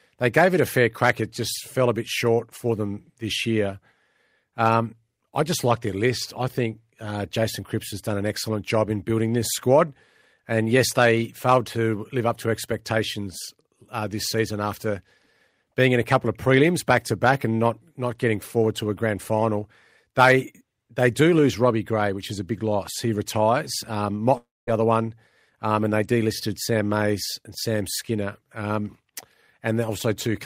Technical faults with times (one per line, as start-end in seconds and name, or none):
24.37-24.69 long network dropout